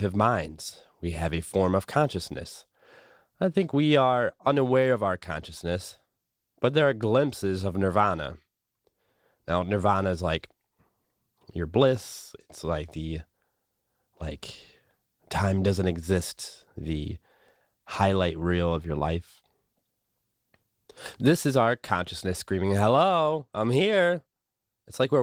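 No technical faults can be heard in this recording.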